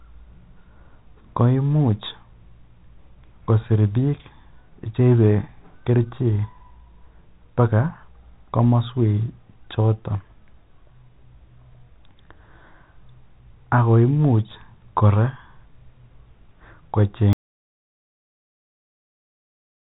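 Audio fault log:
17.33 s to the end: audio dropout to silence. The speech stops abruptly mid-flow and the remainder of the clip is silent, with no room tone or line hiss underneath, so nothing spoken after this point survives. A complete absence of signal rather than a fade points to the input going away, likely a lost connection or mute upstream, while recording continued. Before the cut, the telephone-band sound with nothing above about 3.9 kHz is intact.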